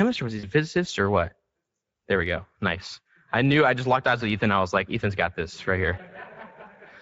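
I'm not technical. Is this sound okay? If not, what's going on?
No. Two things are wrong with this speech recording.

The first runs through the whole clip: Speex codec damage. Speex is an older voice-compression method from internet calls and game chat. To save data it rebuilds the voice from a rough model, with too little detail to spare. The voice sounds hoarse and grainy, with a noisy edge. Unlike music-style compression, it doesn't swirl or warble. It sounds like a rasp layered into the voice.

The second is brief: VoIP packet loss concealed by the speech codec, from about 0.39 to 0.48 s, right after "or was" and before "physicist or what". About 40 ms of the call's data never arrived. Instead of leaving silence, the decoder guessed by stretching the last bit of voice it had, fading it out. You hear a short smeared sound, not a click or a clean gap, and the voice sounds weak for a moment after it resumes.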